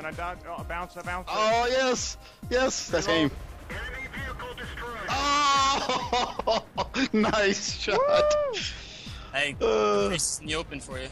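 At 3.07 s and again at 6.39 s the audio lurches forward, a case of compressed frames skipped. Whole 26.1 ms frames never got decoded, so roughly a tenth of a second vanishes at the first jump and about a fifth at the second.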